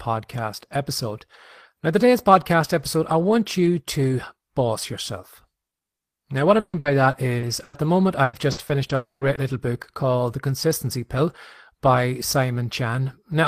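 From 6.59 to 7.75 s, packets went missing or arrived late five times in quick succession, causing repeated packet loss with a robotic sound. The receiver patched each hole by stretching the sound that came just before it, covering 340 ms in all, or 29 % of the stretch. The longest hole was 140 ms. The speech turns choppy, with pieces missing.

The same pattern returns from 8.23 to 9.39 s. This time there are five gaps totalling 220 ms, about 19 % of the span, and the longest is 100 ms, so the speech sounds robotic and broken again.

Inside that second stretch, from 8.95 to 9.24 s, the incoming audio was likely cut off by a long network dropout. For about 0.1 s the last sound carries on as a fading buzz. It then sinks into roughly 160 ms of silence before the speech resumes, with the lost portion never heard.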